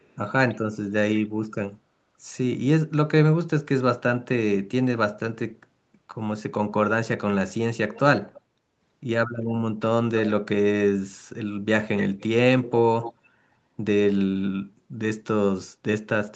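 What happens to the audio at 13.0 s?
A likely echo leak from a far-end loudspeaker slips past the canceller, adding a copy delayed about 281 ms and roughly 10 dB quieter, from 12.64 to 13.14 s.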